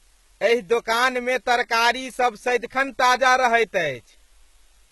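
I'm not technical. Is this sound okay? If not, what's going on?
No. A steady, even hiss runs through the whole speech clip. This is low bit depth with dither: too few levels, about nine bits' worth, turned into constant noise.

The treble is dull above about 12 kHz and s sounds come out gritty and lispy. This is likely HE-AAC compression, which fakes the highs.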